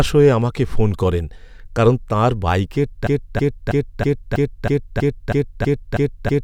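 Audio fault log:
3.07–6.43 s, broken-record loop: the player or stream likely stalled after "করেন কারণ তাঁর বাইকের" and kept resending its last held fragment, so a 0.32 s slice repeats exactly, back to back, ten times to the end, and the speech due there is lost.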